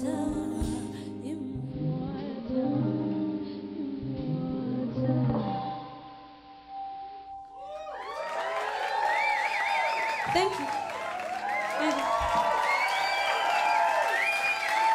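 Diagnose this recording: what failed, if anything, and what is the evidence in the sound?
Digital radio blending to analogue, at the receiver: from 1.59 s to 7.38 s the hybrid tuner crossfades over about 167 ms to the AM simulcast and back. A spectrogram shows a hiss floor roughly 30 dB down, with the waveform level unchanged.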